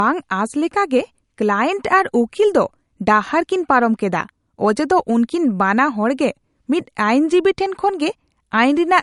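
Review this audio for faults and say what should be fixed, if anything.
Throughout the speech, nothing sounds above 11.2 kHz, and the smearing of a coarse encoding remains. This is likely low-bitrate audio saved at a high bitrate: the sound points to an MP3 near 51 kbit/s re-encoded near 256 kbit/s, which cannot restore what was discarded. A plain low-pass filter would leave the cut-off without that codec smearing. Encode from the original source rather than from an already compressed copy.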